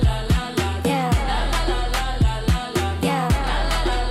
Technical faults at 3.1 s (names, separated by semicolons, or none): none